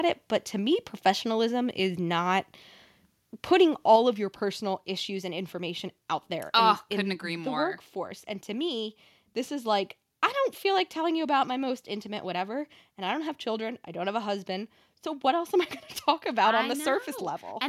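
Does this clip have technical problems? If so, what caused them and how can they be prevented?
Yes. At 3.96 s, speech and background fall together by about 4 dB: microphone volume stepped down, likely by the call software's automatic input adjustment. Prevent it by disabling automatic microphone level control and setting a fixed input gain with some headroom.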